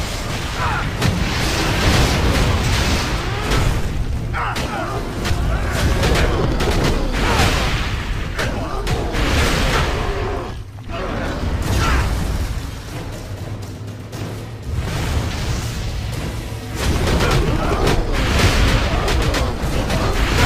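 No technical faults can be heard anywhere in the audio. Nothing breaks up, drops out or changes abruptly at any point.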